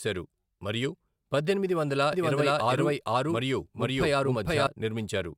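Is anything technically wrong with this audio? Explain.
Yes. From 2.13 s to 4.67 s, right after "మరియు పద్దెనిమిది వందల", there is a doubled audio track: a second copy of the speech runs about half a second behind the first, at roughly the same loudness. This is likely a slower second capture path mixed in with the main one. Unlike an echo or reverb, the copy keeps the full frequency range, has no decay or room colour, and starts and stops abruptly rather than fading.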